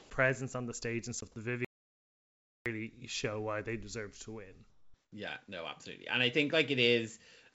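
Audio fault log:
0.00–0.10 s and 4.70–5.12 s: comfort noise in place of the background. The first patch lasts about 0.1 s, just before "presence on the stage." The second lasts 0.42 s, right after "they deserve to win." In both, the real room sound gives way to a smooth, featureless hiss. This likely comes from discontinuous transmission, where the receiver fills pauses with synthetic noise. The first patch sits about 5 dB off the surrounding background. The second matches its level.
1.18–1.22 s: wireless microphone squelch dropout. The radio link fades and the receiver's squelch mutes the output. The mute itself lasts about 19 ms. A brief rise of static comes before it, so the whole disturbance spans roughly 40 ms. It is heard as a quick crackle, a tiny hole, then the sound returning.
1.65–2.66 s: audio dropout to silence. The sound stops dead for about 1.01 s, then resumes at "show why they deserve." The gap is silent with no room tone. 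That points to the input being lost while silence kept being written. A dropped link or disconnected source is the likely cause. Whatever was said in that second is gone.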